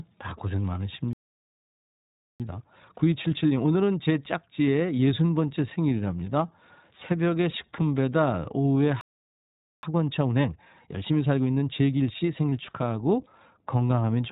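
iLBC codec, throughout the speech: the whole clip is band-limited with nothing above about 4 kHz, and each 20 ms frame is coded on its own. The result is plainly audible roughness and a slightly synthetic edge, in a way that fits a bitrate around 15.2 kbps.

Playback stall, 1.13 to 2.40 s: the sound cuts out mid-flow for about 1.27 s, likely because the player ran short of data or its thread was held up, and then resumes.

Time-compressed catch-up, 2.40 to 5.40 s: to recover the backlog, the player trims and cross-fades small slices of audio, so the speech runs at about 1.15 times normal speed while keeping its pitch.

A second playback stall follows at 9.01 to 9.83 s, a silence of about 0.82 s before the sound continues.

A second time-compressed catch-up runs from 9.83 to 12.83 s. It is faster this time, at about 1.25 times speed.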